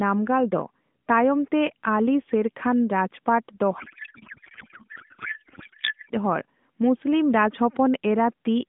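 From 3.80 to 6.11 s the speech dissolves into garbled noise and warble that barely tracks it, a codec payload misread: octet-aligned AMR frames decoded as bandwidth-efficient, scrambling every field.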